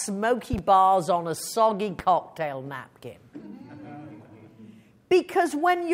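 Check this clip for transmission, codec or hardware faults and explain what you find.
There are two loud pops: a quick double at 0.53 to 0.61 s, then a single at 1.99 to 2.02 s, each roughly 10 dB above the sound. They're likely voltage spikes from static, a switch or a driver glitch, landing as sharp thumps while the audio carries on underneath.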